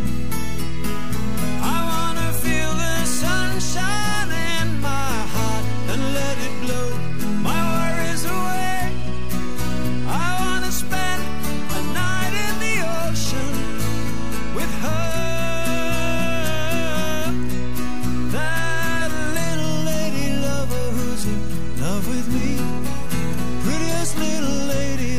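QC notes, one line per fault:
Throughout, DC offset: nothing audible marks it by ear, since a constant shift carries no tone, but the meters show the waveform sitting off the zero line for the full length, with steady energy piled at the very bottom of the spectrum. The whole signal has been pushed by a fixed amount, about -16 dBFS, which eats into headroom on one side.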